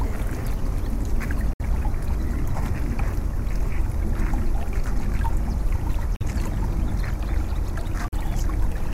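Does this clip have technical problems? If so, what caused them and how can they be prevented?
Yes. The sound cuts to silence at 1.53–1.62 s, 6.16–6.22 s and 8.08–8.14 s, gaps of 64, 43 and 43 ms, then resumes as if it had played on. This is likely a Bluetooth dropout: audio packets missed their deadline at the headphones and were discarded, which fits two or three lost packets per gap. Keeping the headphones close to the source, with less 2.4 GHz interference, prevents it.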